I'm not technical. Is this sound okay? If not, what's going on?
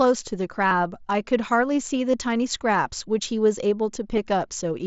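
No, not quite. There are three brief glitches from concealed Bluetooth headset packet loss: at 0.68 to 0.71 s (30 ms), 2.11 to 2.14 s (about 22 ms), and a tiny one at 4.17 s (under 10 ms). The wireless link between the headset and phone dropped bits of sound, and the phone filled each gap by repeating a matching slice of what it had just heard. The two longer gaps come out as a quick buzzy, held tone with a slight warble as the real speech returns. The last one is almost hidden.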